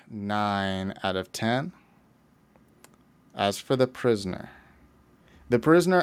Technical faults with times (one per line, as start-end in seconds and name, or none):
0.11-1.72 automatic gain rising